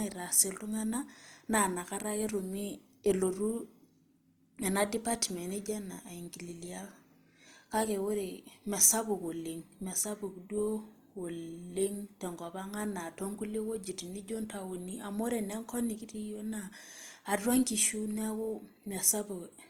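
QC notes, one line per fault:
Throughout: Opus compression. The speech sounds plainly rough and grainy, with tonal parts turned noisy rather than swirling, and content still reaches about 20.2 kHz. This is likely Opus CELT mode filling bit-starved bands with folded or noise energy, consistent with roughly 24 kbps.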